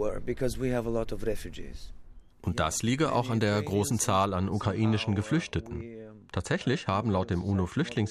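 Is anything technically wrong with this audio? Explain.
Yes. De-emphasis applied wrongly, from 4.25 s to the end at 8.10 s, just after "auch an der großen". A treble-cutting filter meant to reverse pre-emphasis has acted on speech that was never boosted, or has been applied a second time, so the response tilts steadily downward above the midrange, sitting about 11 dB lower at 10 kHz than at 1 kHz. From that point the speech turns dull and muffled, with sibilants and consonant edges softened.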